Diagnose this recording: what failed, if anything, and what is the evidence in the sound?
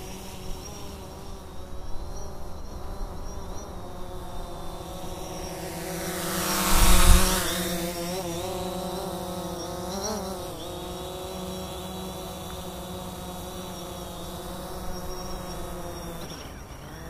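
Nothing failed in this recording of sounds. No stage from capture through to playback leaves any audible trace of a fault.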